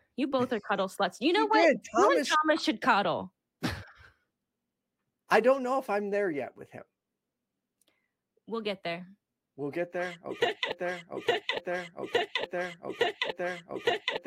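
At 10.72 s the speech locks into a broken-record loop: a 0.86 s fragment repeats exactly, back to back, four times and runs to the end of the clip. The likely cause is a player or stream stalling and resending its last buffered piece, so the intended audio is lost.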